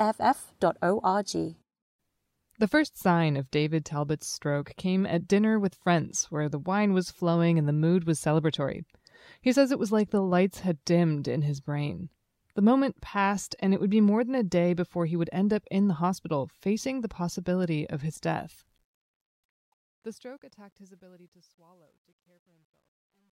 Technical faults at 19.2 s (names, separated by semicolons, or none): truncation distortion on a fade